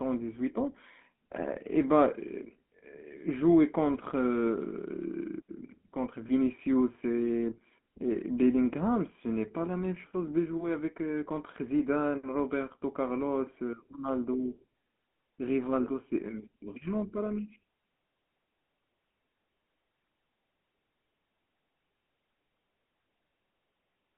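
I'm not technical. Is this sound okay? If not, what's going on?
No. The GSM full-rate codec, the coding used by early mobile phones, affects the whole recording. It rebuilds the speech from a simplified model of the throat and mouth, giving a plainly buzzy, gravelly roughness. Everything above about 3.4 kHz and below 200 Hz is cut.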